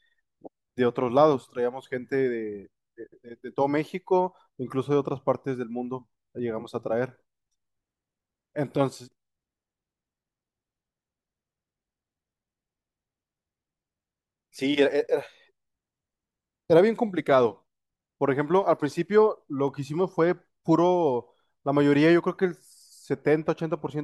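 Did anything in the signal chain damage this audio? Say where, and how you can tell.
Yes. Dropped samples at 6.39 s and 19.68 s: each is a single sharp click, a thin vertical line across the spectrum. The likely cause is a driver or buffer hiccup that skipped a handful of samples, so the waveform jumps to a later value.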